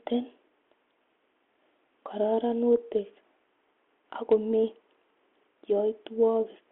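No technical faults are audible.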